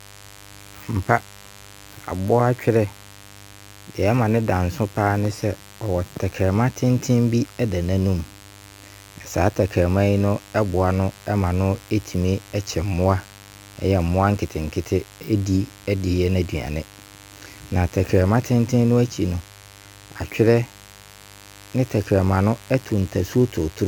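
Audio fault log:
throughout: mains buzz. A steady, raspy buzz sits under the speech for the whole clip, built on a 50 Hz mains fundamental with a dense ladder of harmonics climbing well into the kilohertz range. The rasp comes from sharp switching spikes, two per mains cycle, of the kind a dimmer, rectifier or unshielded run lets into the signal path. It sits roughly 25 dB below the speech.
throughout: generation loss. The speech sounds swirly, smeared and hollow, with consonant attacks blurred, more damage than a single pass at 96 kbit/s AAC-LC would normally leave. Nothing remains above 17 kHz. The likely cause is repeated decoding and re-encoding, around four passes. Each pass quantises again on a shifted frame grid, so the coding noise and spectral holes pile up rather than staying at one generation's level.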